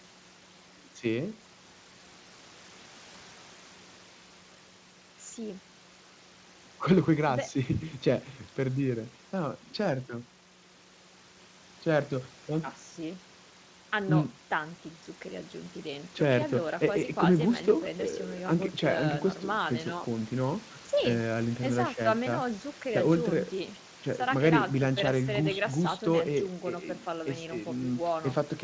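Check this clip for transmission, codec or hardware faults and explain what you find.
No faults found; the speech tops out at 8 kHz, as expected after ordinary call microphone processing, and nothing in the clip calls for action.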